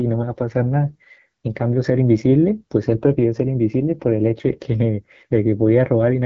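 Speech coded with the AMR wideband (HD Voice) codec throughout: raspy, rough texture points to a low mode near 8.85 kbit/s, with nothing above 7.4 kHz.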